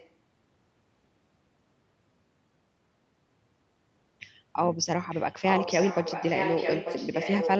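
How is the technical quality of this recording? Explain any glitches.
The recording has audible echo leak, likely from a far-end loudspeaker whose echo canceller let the pickup through. A delayed copy of the speech, trailing by about 0.89 s, appears faintly at 0.0–0.1 s and 5.1–5.25 s, then becomes nearly as loud as the direct speech from 5.49 s to the end. This gives a doubled sound over the speech, which is band-limited to 8 kHz.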